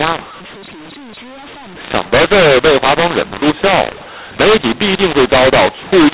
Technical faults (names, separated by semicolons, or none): mu-law and A-law mixed up